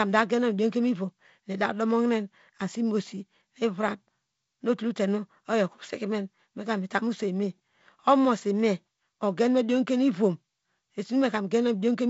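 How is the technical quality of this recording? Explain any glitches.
No glitches or faults heard.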